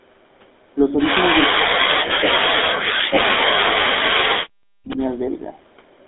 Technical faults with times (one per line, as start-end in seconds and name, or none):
0.00-6.07 GSM full-rate codec
1.50-2.72 speech suppressed in double talk
2.08-2.12 lost GSM frames
4.89-5.10 echo leak